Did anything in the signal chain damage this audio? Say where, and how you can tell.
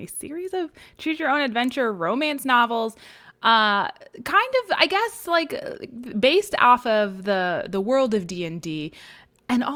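No, nothing along the chain from capture to playback has left a detectable mark on this speech recording, and the signal holds steady and intact throughout.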